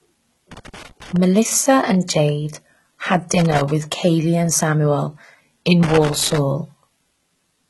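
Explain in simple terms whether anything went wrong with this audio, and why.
The speech has a gritty, metallic top end throughout. S sounds come out gritty and lispy, and nothing is left above roughly 12 kHz. That points to heavy HE-AAC compression as the likely cause: the codec keeps only the lower frequencies and fakes the treble by copying them upward.

Three bursts of scratchy crackle cut in, from 0.52 to 1.16 s, 3.33 to 3.71 s and 5.83 to 6.38 s. This is loose connector crackle. A worn or dirty contact in the cable keeps breaking and remaking the connection, chopping the sound into crackle.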